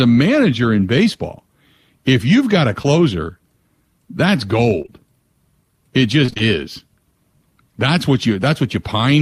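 Short concealed packet loss hits at 1.13 s after "manager in", 2.82 s after "if you've got a", and twice back to back from 4.82 to 4.89 s. Each time, a few hundredths of a second never arrived. The receiver patched the hole by extending the last sound, leaving a brief smear or wobble.

Repeated packet loss causes robotic sound from 6.25 to 6.42 s. Several short holes follow each other closely, and about half of that stretch is patched. The sound turns choppy.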